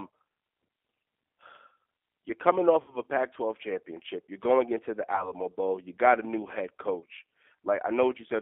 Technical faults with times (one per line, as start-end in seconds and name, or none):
0.00-8.41 G.729 codec
2.82-2.97 VoIP packet loss concealed by the speech codec
5.15-5.32 VoIP packet loss concealed by the speech codec
6.99-7.04 VoIP packet loss concealed by the speech codec